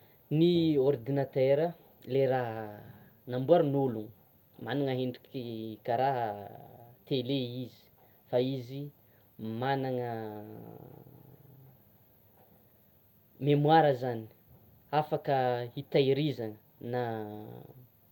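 No technical faults can be heard anywhere in the recording.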